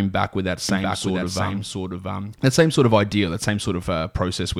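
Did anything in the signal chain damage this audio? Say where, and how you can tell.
Yes. From 0.69 to 2.33 s, a doubled audio track appears. A dry, full-band copy trails about 0.7 s behind, a few dB quieter, and starts and stops abruptly. On a spectrogram, the speech patterns repeat shifted sideways. The likely cause is a second, slower capture path mixed in.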